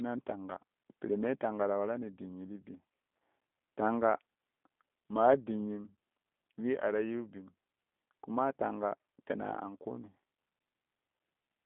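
The whole speech clip goes through the G.729 codec, squeezed to a 200 Hz to 3.5 kHz band. It's plainly rough and synthetic, consistent with an 8 kbit/s G.729A link.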